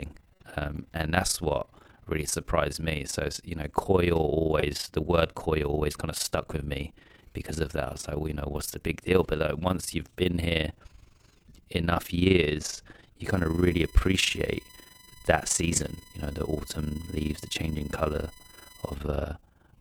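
Overlap-add ripple runs through the whole recording. The speech was split into windowed frames and rejoined with overlaps that do not sum to a steady gain. So the level dips and recovers once per frame, at roughly 20 Hz. The swing is about 11 dB deep. That is strong enough to give every phrase a rough, robotic flutter. It sounds like a fast tremolo laid over the voice.

A corrupt frame decoded comes first at 0.34 to 0.44 s, just before "um and that's what". Flipped bits reached the decoder, and it played the damaged data anyway. The misread values spread energy into the wrong frequencies. This one spans a few frames and is heard as a short burst of noisy chirping. A second, briefer one hits 4.60 to 4.63 s, after "you know coil" and before "the word coil always". It affects a single frame and comes out as a quick blip.

USB whine runs from 13.26 to 18.96 s. Current pulses from the bus's 1 ms frames leak into the audio through power or ground. 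The result is a fixed-pitch tone at 1 kHz with harmonics, and the 4 kHz component is the loudest. It sits roughly 25 dB below the speech. It is heard as a thin, steady, high whine under the voice until it stops near the end.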